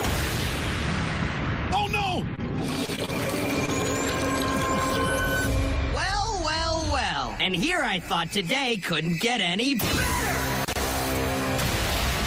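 A brief held-over sound at 2.35 to 2.40 s, and again at 2.86 to 2.90 s, is a short stall from a late packet. Each time a packet arrived after it was due and the jitter buffer emptied. The receiver stretched the last sound by about 23 ms and then 19 ms before picking up exactly where it left off. Nothing is lost, but the playout delay grows by those amounts.

Small smears or wobbles follow at 2.96 to 2.99 s, 3.05 to 3.10 s and 3.66 to 3.70 s. These are short concealed packet losses. In each case about 20 ms of audio never reached the decoder. The receiver patched the gap by extending the preceding sound for roughly 18 to 22 ms and then blended back into the real signal. Because the concealed audio was invented rather than received, the underlying sound at those moments is actually missing.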